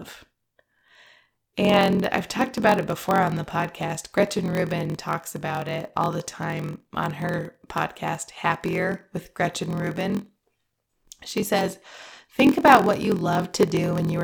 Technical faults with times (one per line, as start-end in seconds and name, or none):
0.00-14.23 block size mismatch (padded)